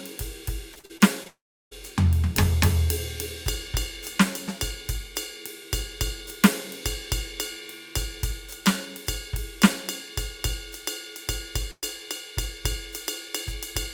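From 0.73 to 1.27 s the music breaks up with repeated packet loss, giving a robotic sound. Five short holes, the longest 42 ms, are patched by repeating the last sound. About a quarter of the stretch is filled this way. It sounds choppy.

At 1.27 s the music stops outright until 1.73 s. A brief fading buzz or hiss is followed by about 350 ms of silence. This is likely a long network dropout. Roughly 440 ms of music never arrives, and playback resumes past the gap.

At 11.71 s a burst of packet loss removes about 120 ms of music. The receiver extends the last sound and fades it, ending in about 40 ms of silence. At 11.84 s the music picks up further on, with that piece missing.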